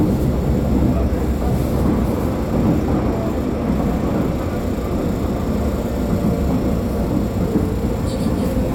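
No technical faults can be heard anywhere in this recording of sounds. Nothing in the signal chain draws attention to itself at any point.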